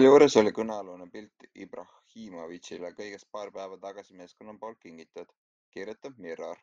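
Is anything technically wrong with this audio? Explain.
Yes. Zipper noise appears from 0.38 to 0.86 s in this speech, during a level drop of roughly 25 dB. The gain falls in discrete 1 dB steps, around 50 of them per second, with no interpolation between them, so each jump puts a small discontinuity in the waveform. The result is a fast ticking, zipping texture riding on the speech while the level slides down.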